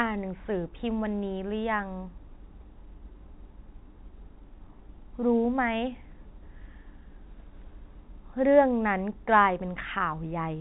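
No technical faults can be heard anywhere in this speech.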